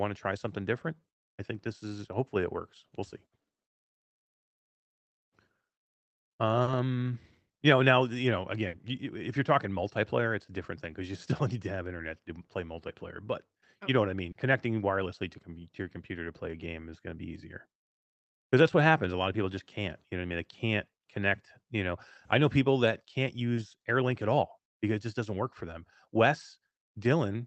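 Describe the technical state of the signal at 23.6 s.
A brief smear, a wobble in the speech, runs from 23.55 to 23.59 s. This is short concealed packet loss: 20 ms of audio arrived too late to decode, so the receiver extended the preceding sound to cover the gap, then blended back into the real signal.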